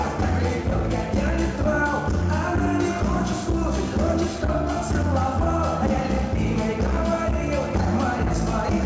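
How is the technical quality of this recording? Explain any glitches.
There are no glitches or technical faults to point out in this recording. It has come through a call path whose codec leaves nothing above 8 kHz, a limit that fits a wideband codec such as G.722.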